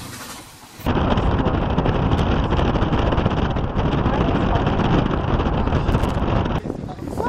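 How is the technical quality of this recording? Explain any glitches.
The recording has one recurring glitch: loose connector crackle, at 2.18 to 2.20 s and again, longer, from 5.91 to 6.20 s. A worn contact breaks and remakes the circuit, chopping the signal into irregular scratchy bursts that show as ragged broadband vertical streaks and jagged waveform spikes.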